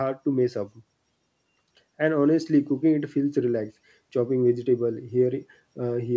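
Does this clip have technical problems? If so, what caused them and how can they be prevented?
No, this clip has no technical problems.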